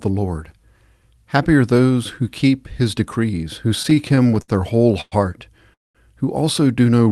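From 3.69 to 5.14 s, right after "who keep his decrees", the speech shows repeated stalls (stutter): 16 short gaps, the longest 107 ms, where the jitter buffer ran dry and the last sound was stretched to fill about 301 ms. Nothing is lost, but the speech drags and jerks. Unlike a single freeze, the stalls are many and brief.

At 5.74 to 5.97 s comes a call audio freeze, likely from packets held up in transit that emptied the jitter buffer. The last sound is carried briefly, then 190 ms of silence, 210 ms in all. Speech resumes exactly where it stopped, later by that amount, so it is a gap rather than a cut. The band is limited to about 12 kHz by the call path.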